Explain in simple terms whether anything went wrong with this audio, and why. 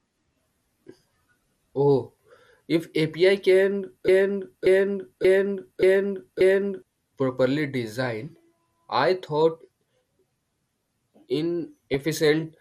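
Three things go wrong in this speech.

Throughout, the voice sounds dull and gurgly, with a grainy edge on the sounds. That is MP2 compression, likely squeezed too hard, so the top of the sound is switched off and the rest is roughly rounded. Unlike a muffled microphone, the dullness shimmers and bubbles rather than staying smooth.

From 4.08 to 6.82 s, a piece just over half a second long plays five times back to back, identical each time. This broken-record loop likely comes from the stream stalling and resending its last fragment, so whatever should have played there is missing. It differs from an echo because the repeats don't fade and nothing new plays underneath.

At 11.94 s a brief burst of noise blips. That is DAB burbling, where corrupted data slips into the decoder and puts short blips of noise into single slices of the sound. Unlike the steady compression dullness, it is a sudden, isolated burst.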